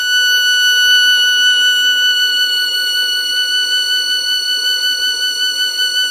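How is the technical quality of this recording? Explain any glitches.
The technical quality is poor, with two audible problems in the music.

Throughout, the music sounds watery and swirly, with metallic chirps on bright attacks, and nothing is present above 15.2 kHz. This is likely MP3 compression at a starved rate, fitting something like 40 kbps. The encoder has cut the treble and left weak frequency lines flickering between frames. A fixed cutoff with shifting artefacts distinguishes it from plain low-pass filtering.

From 1.93 s to the end, a thin, steady whistle at 4.4 kHz sits roughly 10 dB below the music, swelling and fading slowly in level. This is likely a feedback whistle from a speaker-to-microphone loop held just short of runaway. It stays at one pitch and does not grow, which separates it from full howling feedback.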